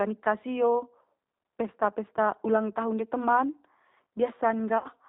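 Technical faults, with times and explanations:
Throughout: G.729 codec. The speech has been squeezed through G.729A at 8 kbit/s, and the damage is plainly audible. The decoder rebuilds each 10 ms frame from a vocal tract filter, a pitch predictor and a handful of pulses, so nothing above 4 kHz survives. That leaves the speech muffled and intelligible but rough, with a slightly synthetic texture where fine detail has been replaced by the coded pulse pattern.
4.78 to 4.88 s: VoIP packet loss concealed by the speech codec. About 60 ms of audio went missing, which fits three lost packets. The decoder filled the gap by repeating its last pitch and filter settings while turning the gain down frame by frame, so the sound smears into a fading buzzy tone or coloured noise instead of dropping to silence. Each frame is built on the previous one, so the speech stays weakened briefly after the packets resume.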